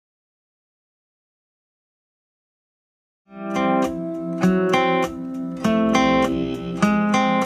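Nothing stood out on listening, and the smooth fade-in from around 3 s rises evenly to full level by 3.79 s with no click or hard edge.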